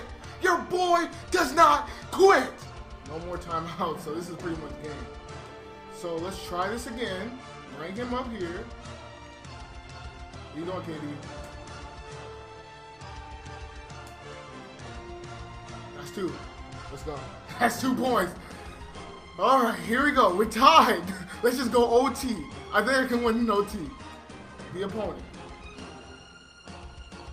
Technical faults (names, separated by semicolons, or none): none